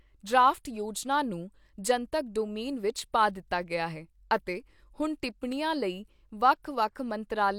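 A speech recording with nothing technically wrong with it.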